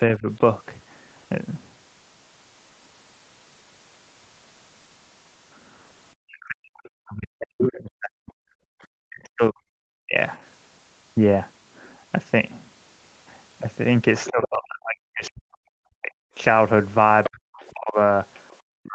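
At 0.18 to 0.28 s the speech dips by roughly 15 dB for about a tenth of a second, and from 6.21 to 10.14 s it is pulled down far harder, by as much as about 40 dB, in pieces adding up to roughly three seconds. This is speech suppressed in double talk, likely an echo canceller that could not tell the near talker from loudspeaker echo and attenuated everything. On a waveform the envelope collapses to near silence in chunks; a spectrogram shows the harmonics fading or vanishing in blocks.

Within that stretch, at 7.62 to 7.71 s, the other side's voice leaks through as a brief scrap only about 5 dB below the talker, likely residual echo the canceller missed. It returns at 14.25 to 14.48 s and again from 17.24 to 18.56 s, around 10 dB down. On a spectrogram it shows as a second, fainter set of harmonic lines that don't follow the main talker's pitch.

From 14.3 s to the end, double-talk suppression sets in again with drops reaching about 40 dB, overlapping those leaks, so the talker is gapped while the leaked voice persists. 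Across the whole clip, the band stops at 8 kHz, which fits the call's microphone processing and a low-bitrate Opus path.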